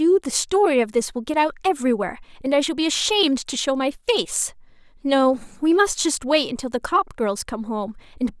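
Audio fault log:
No technical faults are present in the speech recording: the signal holds steady, with no interruptions or disturbances in its level, timing or frequency content.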